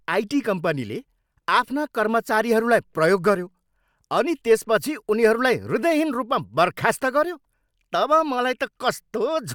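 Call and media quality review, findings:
No audible faults found in this speech recording.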